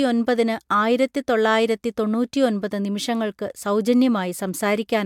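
Nothing in the recording stands out as a technical fault, so there's no problem to point to anywhere along the way.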